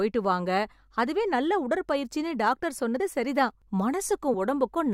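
At 2.99 s and again at 4.33 s the speech jumps forward by about one 21.3 ms frame as compressed frames are skipped. Each join is a sudden skip in the speech.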